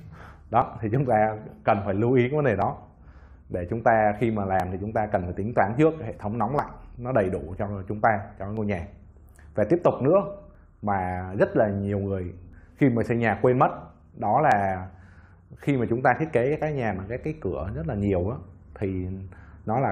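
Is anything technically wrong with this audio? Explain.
Yes. A short click or tiny skip recurs at 0.62, 2.62, 4.60, 6.59, 8.57, 10.55 and 12.53 s, and from 14.52 to 14.54 s, roughly every 2 s. This is overlap between stream segments: with 2 s segments, neighbouring time stamps overlap, so between a few and about 20 milliseconds of sound are cut away at each join and the waveform jumps.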